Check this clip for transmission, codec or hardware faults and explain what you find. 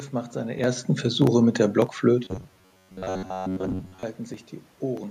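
One fault is audible: robotic sound from repeated short buffers, from 2.25 to 4.03 s, starting just after "mit der". The speech collapses into a rigid, metallic buzz at about 93.8 Hz that still loosely tracks the words. The likely cause is audio arriving too seldom, so the playback side loops its last short buffer while fresh audio is dropped. A repeat period of roughly 10.7 ms fits that buzz, and most of the span is repetition rather than real signal.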